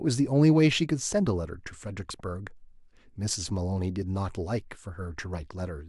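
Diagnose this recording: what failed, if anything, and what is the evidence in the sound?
No fault found in this recording.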